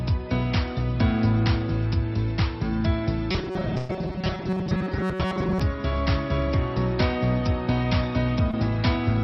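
From 3.31 to 5.60 s the sound turns into a rigid metallic buzz pitched at 188 Hz: robotic sound from repeated short buffers, likely from audio arriving too seldom, so a snippet of about 5.3 ms is looped over most of the stretch. A spectrogram shows evenly spaced horizontal harmonics at multiples of 188 Hz, and the waveform repeats with near-identical cycles.

Inside that stretch, from 3.77 to 3.91 s, comes a burst of packet loss. About 120 ms of audio never arrived, and the receiver bridged 115 ms by extending the last sound and letting it decay. This is heard as a held, fading sound before the audio jumps ahead. On a spectrogram the final spectrum smears flat into a dimming band.

At 8.51 to 8.55 s, short concealed packet loss removes 20 ms. The decoder patches the gap with a continuation of the preceding sound, then crossfades back, leaving a brief smear or wobble. A spectrogram shows a thin slice where detail blurs and resumes.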